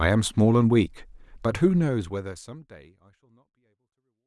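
No technical faults can be heard in this speech recording. The level eases down in a smooth fade out that begins at around one and a half seconds and reaches silence at the very end, with no click or hard edge.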